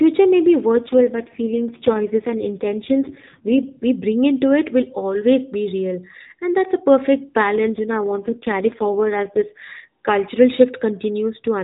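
Twice the network forces the AMR codec down to a lower rate, trading speech bits for error protection. The first time runs from 0.73 to 3.70 s, between "may be" and "we bring into it"; the second runs from 7.56 to 9.65 s, after "that's a perfect". These AMR rate drops keep the narrowband 4 kHz ceiling and open no gap, but the voice turns rougher, buzzier and more synthetic, which fits a fall from 12.2 to 4.75 kbps, until the lightly coded normal rate returns.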